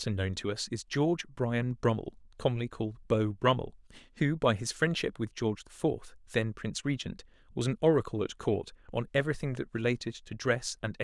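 Nothing goes wrong anywhere in this speech recording; there's no technical fault to point out from the first moment to the last.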